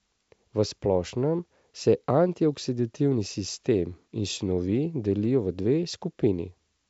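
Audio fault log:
No faults found in this speech clip; the G.722 wideband telephone coding at 64 kbit/s is working normally, with any coding damage faint at most.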